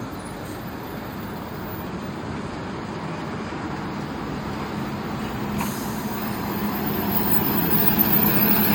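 Nothing stood out as a technical problem on listening to the audio.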